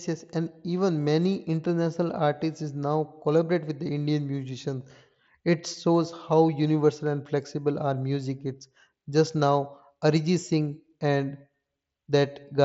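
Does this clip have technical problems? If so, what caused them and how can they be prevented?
No, there are no technical problems in this clip.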